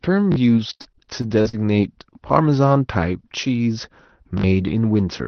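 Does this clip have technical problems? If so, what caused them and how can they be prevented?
Yes. At 0.32–0.36 s and 4.38–4.44 s, a repeated buffer fault occurs: fresh audio arrived late, so the device replayed its last 20 ms buffer two, then three extra times, giving brief stutters. Prevention: use a larger output buffer or higher scheduling priority so audio is always ready in time.

From 0.57 to 1.55 s, repeated packet loss (robotic sound) occurs: eight network gaps, the longest 61 ms, were each patched by extending the previous sound, so about a quarter of that stretch comes out choppy. Prevention: use a steadier connection, forward error correction or a deeper jitter buffer.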